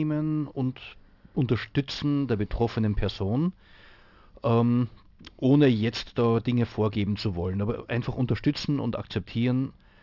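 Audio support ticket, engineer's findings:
Aliasing throughout speech: sibilants gritty, metallic. Resampler, 44.1 to 12 kHz without anti-alias filter; content above 6 kHz folds back, roughly 20 dB down. Spectrogram: energy packed hard against 6 kHz edge, mirrored.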